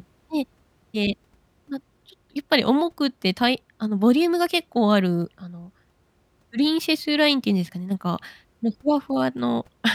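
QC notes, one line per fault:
Nothing stood out on listening to the speech in this clip.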